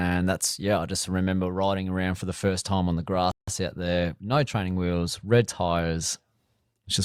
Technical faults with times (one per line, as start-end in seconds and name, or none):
3.31-3.48 Bluetooth stall